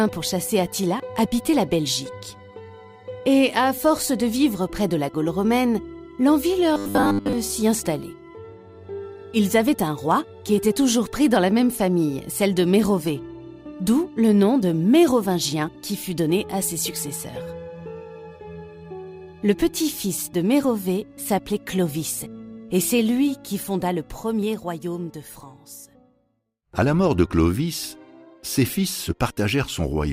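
From 6.74 to 7.33 s the sound turns into a rigid, metallic buzz at 100 Hz. This is robotic sound from repeated short buffers. A 10 ms slice is likely being replayed while new audio fails to arrive. Roughly 70% of that stretch is repeats, and the real audio is skipped.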